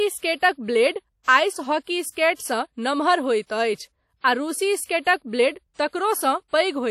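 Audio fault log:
throughout WMA compression: likely a WMA-style transform encoder at a low bitrate, around 48 kbps, leaves the speech ringing and washy, with breathing hiss and nothing above 17.8 kHz.
0.37–0.42 s, 5.01–5.06 s pre-echo: block-wide quantisation noise leaks about 58 ms ahead of sharp attacks, so hiss precedes them, first before "ब्लेड आइस हॉकी", and onsets smear.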